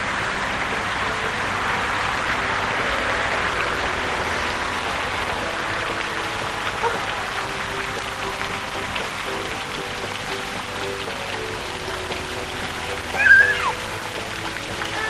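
No faults detected in this recording of sounds; nothing audible to flag.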